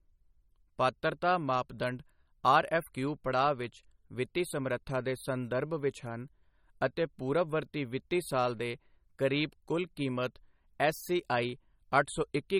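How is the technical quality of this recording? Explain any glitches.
The quality is poor. Plainly audible MP3 compression runs through the whole clip. The speech sounds watery and swirly, and nothing is left above 18 kHz. This is likely a starved encoder, at a low rate near 32 kbps. It zeroes weak frequency lines, which flicker between frames.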